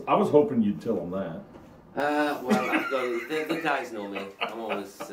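From 0.0 to 2.0 s the audio sounds dull and muffled, the sign of de-emphasis applied wrongly: a treble cut meant to reverse a pre-emphasis boost was applied to audio that had no such boost, or was applied a second time. The top end falls away as a smooth, gradual slope, about 11 dB down at 10 kHz relative to 1 kHz. A low-pass filter would instead leave the treble intact up to a fairly sharp cut-off.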